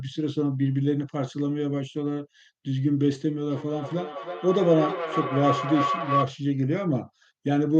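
From 3.51 to 6.34 s, feedback howl: rising loop gain grows a bright spectrogram line near 1 kHz, pulsing roughly three times a second, peaking near speech level.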